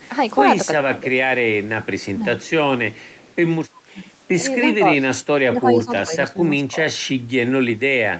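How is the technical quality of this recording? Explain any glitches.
Two recurring glitches mar the speech: a faint delayed echo and repeated dips in the talker's level. Both are typical of a hands-free call. The audio also stops at 8 kHz and has the usual coding noise, which fits a wideband Opus call path.

Echo leak: at 0.0–0.08 s, 1.83–2.05 s, 2.42–2.5 s and 2.92–3.36 s, a faint copy of the speech trails the original by about 0.34 s. It sits roughly 30 to 35 dB below the main voice. This is likely the far side's loudspeaker being picked up by its microphone, with its echo canceller failing to remove all of it before sending it back.

Speech suppressed in double talk: the talker's level sags at 0.78–1.05 s, 2.14–2.2 s, 3.84–4.01 s and across 4.76–6.92 s. The drops are slight in the second case and reach around 15 to 20 dB in the others. The longest stretch is patchy, with about a second of it affected in pieces. 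The likely cause is an echo canceller that could not tell the talker apart from overlapping loudspeaker sound, so it turned everything down.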